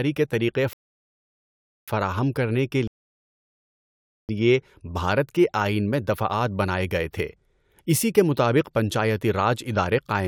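At 0.73 s the speech drops to silence and holds for about 1.1 s. It picks up at 1.88 s exactly where it stopped, with nothing skipped. The same happens again from 2.87 s to 4.29 s, a gap of about 1.4 s. Both are rebuffering stalls: playback ran out of downloaded audio and waited for more, adding time without losing any content.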